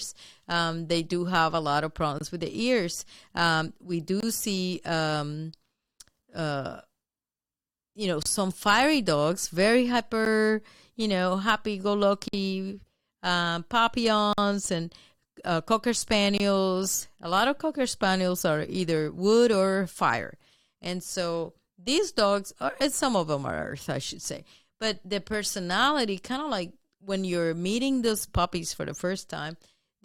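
A gap between stream segments recurs every 2 s, at 2.18, 4.20, 6.22, 8.23, 10.25, 12.28, 14.33 and 16.38 s: timestamp holes filled with silence, 5.5 to 52 ms, heard as hard-edged dropouts and seen as blank vertical stripes.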